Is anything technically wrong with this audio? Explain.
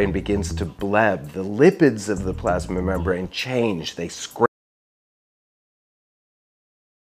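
Yes. At 4.46 s there's an audio dropout to silence lasting to the end. The sound cuts off mid-flow into dead silence, no room tone, likely from a lost input while recording carried on.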